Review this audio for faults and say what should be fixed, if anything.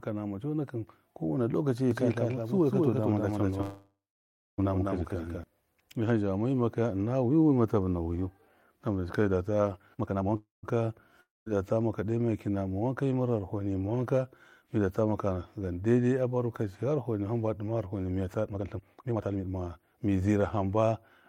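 A doubled audio track runs from 1.91 to 5.44 s. The likely cause is a second, slower capture path or an edit that left two copies out of step. A full-band copy at roughly the same level as the original trails it by about a fifth of a second, with no decay or room colour. The copy cuts in and out abruptly. Prevent it by routing the source through one capture path only and checking edits for stacked duplicates.

A call audio freeze occurs twice, at 3.61 to 4.60 s and at 10.36 to 10.65 s. Packets were likely held up in transit and the jitter buffer ran empty. The receiver stretched the last sound into a fading buzz, which then fell to silence for about 0.6 s in the first freeze and 0.15 s in the second. Speech resumes where it stopped, so nothing is lost, but gaps of 965 ms and 269 ms are inserted. Prevent it with a larger or adaptive jitter buffer and a steadier network route.

A jitter buffer speed-up occurs from 9.79 to 10.35 s at 174% speed and from 18.46 to 20.43 s at 141% speed. 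The receiver was holding more audio than its target and cut the excess by repeatedly removing short pitch-period slices, about 0.4 s in the first stretch and about 0.7 s in the second. Pitch stays put, but the speech sounds rushed. Prevent it with gentler buffer adaptation that limits how fast the delay can be drained.

A long network dropout runs from 11.21 to 11.49 s. No packets likely reached the receiver for that stretch. It filled the hole with a fading continuation of the last sound and then about 0.19 s of silence. When audio returns, 260 ms of speech has been skipped for good, so the sentence jumps forward. Prevent it with forward error correction or redundant packets, and by fixing the link loss.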